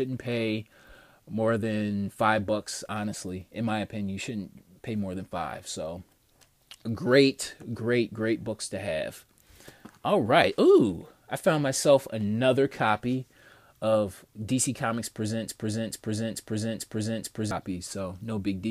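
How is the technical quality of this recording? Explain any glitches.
The recording has one clear glitch, a broken-record loop, from 15.49 to 17.51 s. A fragment of about 0.44 s repeats exactly, back to back, five times, and the audio that belonged in those two seconds never plays. The likely cause is a player, encoder or stream that stalled and kept resending the last piece it held.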